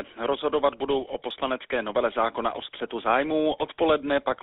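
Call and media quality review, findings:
GSM full-rate codec, whole clip. Buzzy, gravelly roughness on all speech, plainly audible. Band limited to roughly 300 Hz to 3.6 kHz. Pulse-driven vocal-tract model with coarse excitation, consistent with the 13 kbps full-rate coder. Check transcoding path.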